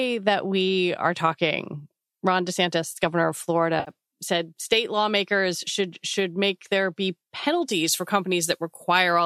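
A speech recording carrying light, grainy texture that likely comes from low-delay AAC (AAC-ELD) coding at 64 kbps. It shows two instances of AAC frame loss with concealment. From 3.80 to 3.91 s about 70 ms of audio goes missing, which fits seven 10 ms frames. The decoder patches the gap from the last good spectrum, so the speech turns smeared and noisy. On a spectrogram, the harmonic striations blur into a diffuse noise-like patch there. At 7.41 s a single 10 ms frame drops, giving a brief phasey blip and a narrow vertical smudge. From 7.71 s to the end, pre-emphasis is left on, following an FM 75 µs curve with no matching de-emphasis. Treble sits about 14 dB hotter at 10 kHz relative to 1 kHz, making the voice thin, bright and sibilant. The spectrogram's upper bands visibly brighten at that point, and the waveform gains spiky high-frequency detail.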